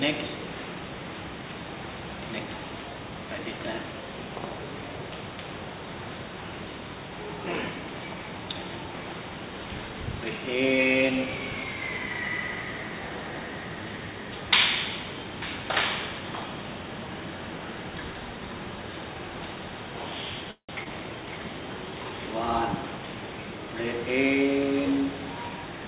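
At 20.51 s the sound stalls: the last moment is stretched into a fading buzz, then goes quiet for about 100 ms before resuming at 20.72 s. This is a call audio freeze. Packets were likely held up in transit, so the jitter buffer ran dry and the receiver carried the last sound forward. When delivery resumed, playback picked up exactly where it stopped. About 176 ms of filler was inserted and nothing was lost, so everything after it plays that much later.

Just after, at 20.84 s, a brief smear lasting under 50 ms marks a short concealed packet loss. Here about 60 ms of audio never reached the decoder in time. Only about 18 ms of synthesized continuation covers the hole before the real signal blends back in, so the rest is simply skipped. That drop pulls playback back toward real time by roughly 40 ms. Throughout, the G.711 A-law call path leaves nothing above 4 kHz.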